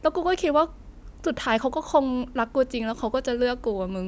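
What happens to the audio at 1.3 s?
Nothing goes wrong at 1.3 s; the speech carries on intact through that moment.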